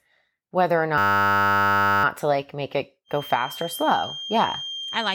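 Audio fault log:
0.98–2.04 s, system hang loop: Just after "whether or", the speech freezes into a steady 100 Hz buzz. A single 10 ms slice of audio repeats exactly, over a hundred times, because the driver stalled while the hardware kept replaying the same ring buffer, which fits a buffer of about 10 ms. Speech resumes at "to like make it" with little or nothing skipped. Unlike a feedback whistle, the buzz is a rigid, perfectly periodic repeat of captured sound rather than a pure tone.
3.04 s to the end, feedback whistle: Just after "to like make it", a thin 3.2 kHz whistle sits behind the speech, about 10 dB below it. Its level swells and fades slowly while its pitch stays fixed. It is likely a loudspeaker-to-microphone loop held just at the edge of feedback, so that one frequency keeps ringing without growing. Unlike the hang loop's buzz, this is a single pure high tone that runs alongside the speech instead of replacing it.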